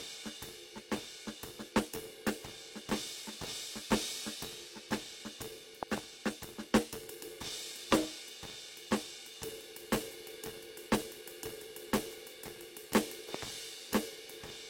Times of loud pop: 5.83-6.00, 9.94-9.96, 13.34-13.44

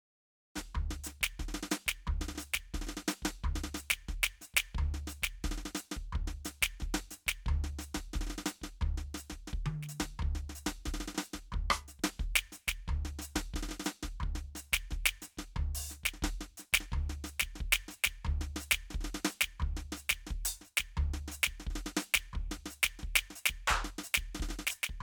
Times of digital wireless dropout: none

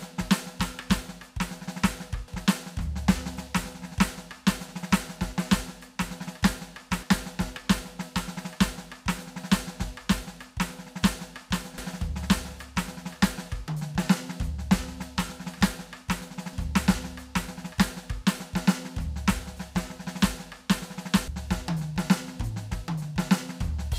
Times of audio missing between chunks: 2.28, 11.78

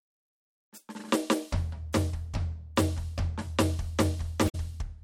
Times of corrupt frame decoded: 4.47-4.55

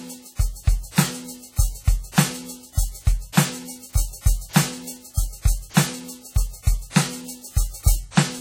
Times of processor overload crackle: none

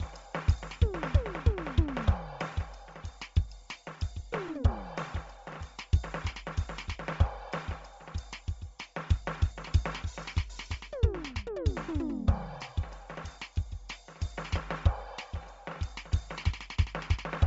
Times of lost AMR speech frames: none

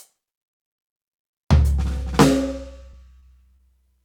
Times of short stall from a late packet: 2.91-2.94, 3.19-3.23, 3.56-3.60

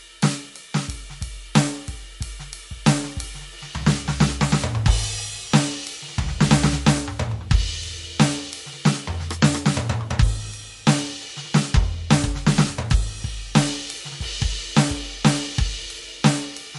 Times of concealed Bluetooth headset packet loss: none

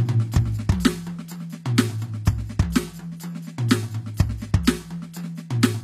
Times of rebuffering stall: none

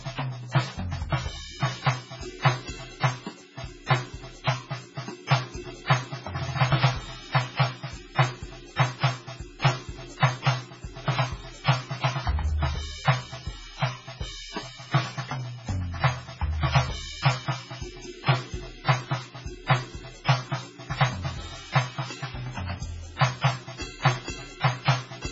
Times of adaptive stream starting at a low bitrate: none

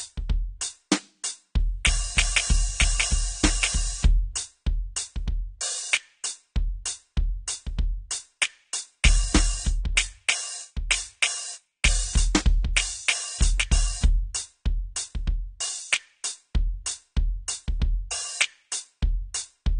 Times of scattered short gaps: none

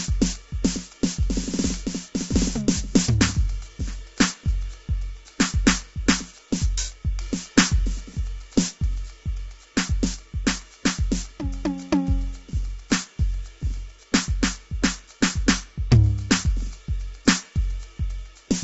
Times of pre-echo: none

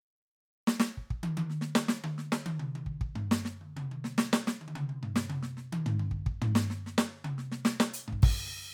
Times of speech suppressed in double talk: none

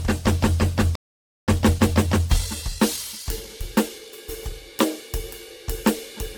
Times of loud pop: none

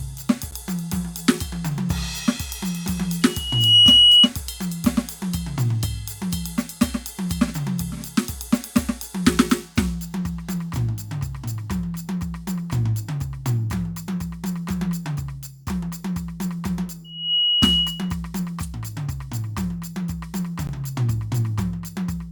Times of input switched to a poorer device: none

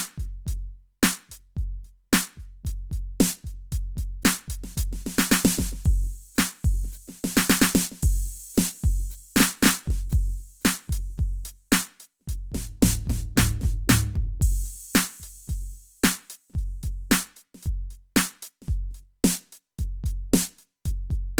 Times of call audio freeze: none

